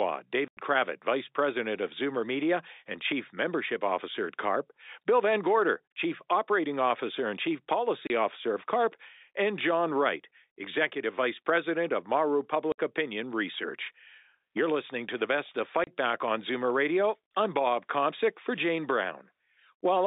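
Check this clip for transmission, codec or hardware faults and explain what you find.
The speech has four dropouts from packet loss filled with silence, at 0.48 to 0.57 s, 8.07 to 8.10 s, 12.72 to 12.78 s and 15.84 to 15.87 s. The gaps last 90, 30, 60 and 30 ms, which fits 30 ms packets. The receiver substituted dead silence for each missing block, so the audio cuts out abruptly with hard edges. The G.711 telephone band, roughly 300 Hz to 3.7 kHz, carries the audio on either side of each gap.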